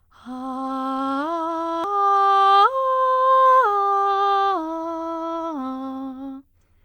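A short music clip with a single glitch: at 1.84 s there is a brief digital blip lasting only a few milliseconds that cuts across the music. This is damaged data in a compressed stream. A small stretch of the encoded file was corrupted, so the decoder misread the affected frame, lost sync, and had to hunt for the next valid frame header before normal playback could resume.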